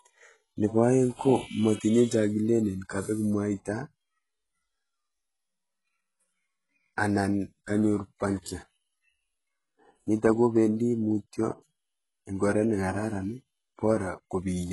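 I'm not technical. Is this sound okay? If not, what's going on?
No. From start to finish, the speech has a gritty, metallic edge, and the s sounds come out smeared or lispy rather than crisp. Above about 11.5 kHz there's nothing at all. This is heavy HE-AAC compression, most likely at a very low setting. To save space, that kind of encoder keeps only the lower part of the sound and fakes the treble by copying lower tones upward, so the brightness is there but doesn't match the real voice.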